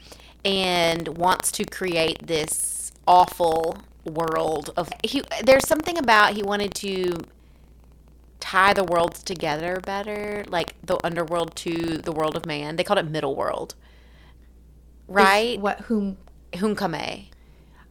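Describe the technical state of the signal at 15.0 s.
At 15.0 s the speech signal is intact, with no audible fault at that moment.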